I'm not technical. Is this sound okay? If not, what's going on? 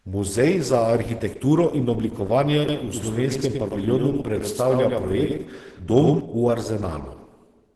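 No. Throughout the speech there's a muffled, hoarse and grainy quality, as if the sound had been squeezed down and the fine detail smoothed away, leaving a rough edge on everything. This is Opus compression. The audio was most likely squeezed hard by Opus, which at low quality switches to a mode that saves space by keeping only a rough outline of the sound.

From about 2.7 to 6.2 seconds, the speech sounds doubled, with a second, quieter copy following about a tenth of a second behind. It has no echo tail or room sound. It simply appears and vanishes abruptly at those points. This is a doubled audio track, the same audio mixed in twice out of step, likely because it was captured a second time through a slower path or an edit left two copies overlapping.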